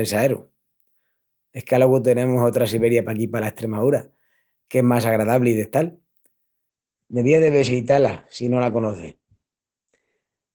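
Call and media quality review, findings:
Call bitrate drop, 6.71 s to end of clip (about 3.8 s): bandwidth estimate falls and the encoder is throttled. Coarse coding is consistent with roughly 32 kbps dropping to 11 kbps. Audio band narrows from 20 kHz to 8 kHz. Speech turns muffled and rough, with a watery texture, and does not recover before the end.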